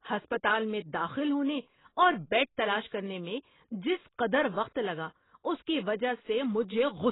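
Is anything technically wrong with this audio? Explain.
Yes, and it runs through the whole speech clip. There's nothing above about 3.9 kHz, so it sounds dull and muffled, with a smeared, warbly texture from heavy coding damage. That's likely AAC compression, specifically AAC-LC squeezed hard enough to fit something like 16 kbps. At a rate that low the encoder throws away the top of the spectrum and quantises what's left very coarsely, so detail smears across each frame.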